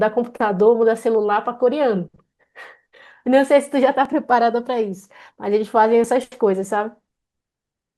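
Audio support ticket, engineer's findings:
Tiny skips at 4.05 s and 6.04 s, roughly 2 s apart. Overlap between stream segments in the segment joiner. Timestamps overlap at boundaries, so about 8 ms and 5 ms of undoubled speech are cut and the waveform jumps.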